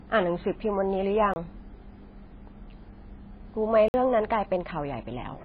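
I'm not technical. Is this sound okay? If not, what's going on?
No. The recording was likely squeezed hard by MP3 compression, which throws away detail to save space. Everything above 5 kHz is gone, so the speech sounds dull and muffled, with a watery, swirly quality and smeared s sounds throughout.

There are also two blocks of digital silence, where the sound cuts out and is replaced by nothing. You hear a sudden short hole, from 1.34 to 1.36 s and from 3.88 to 3.94 s.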